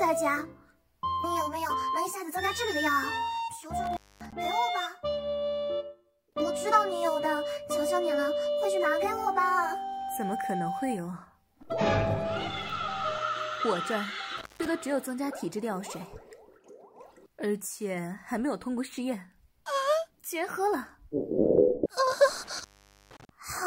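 Intermittent contact breaks the signal three times: at 3.84–4.33 s (open about 240 ms), 14.38–14.66 s (about 155 ms) and 22.44–23.29 s (about 470 ms). A loose cable or plug briefly loses its connection, so the sound drops out to faint hiss, with crackle as the contact scrapes open and closed. On a waveform each gap collapses to near-flat, edged by sharp spikes. A spectrogram shows dark bands bordered by thin vertical broadband streaks.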